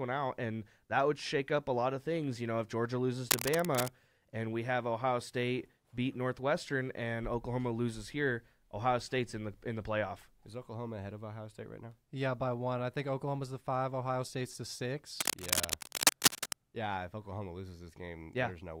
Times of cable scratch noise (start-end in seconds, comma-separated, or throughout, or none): 3.29-3.89, 15.19-16.53